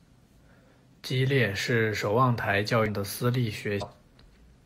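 A brief glitch at 0.41 s, another from 2.84 to 2.88 s just after "守望台教", and another from 3.78 to 3.83 s break into the speech. Each is damaged data in a compressed stream: bytes in the encoded file were corrupted, so the decoder misread those frames, lost sync, and produced garbled output until it locked onto the next valid frame header.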